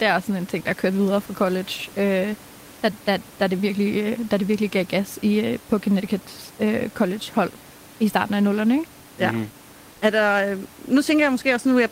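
At 9.91 s the background drops out for about 100 ms, until 10.01 s, and a stand-in noise sits in its place at about 1 dB lower level. That's comfort noise in place of the background. The likely cause is discontinuous transmission, something like Opus DTX: the sender goes quiet when it hears no speech, and the receiver fills the gap with synthetic noise. The real room noise, about 26 dB under the speech, is briefly swapped out, then returns.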